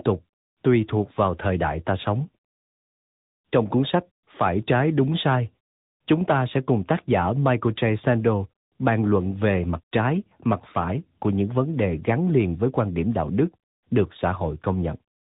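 From start to finish the speech carries tandem speech coding: it's been through CVSD, then G.711 mu-law, then AMR-NB at 10.2 kbit/s, so two speech coders ran in a row, the second chewing on the first's output. You hear it rough and warbly, muffled with nothing above 3.8 kHz.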